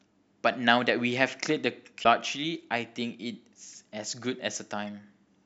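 A short glitch cuts into the speech at 2.00 s, lasting about 50 ms, and a briefer one follows at 4.87 s. Both come from damaged data in a compressed stream: part of the encoded data was lost or overwritten, so the decoder misread those frames, lost its place, and had to hunt for the next valid frame header before normal playback resumed, producing each brief glitch.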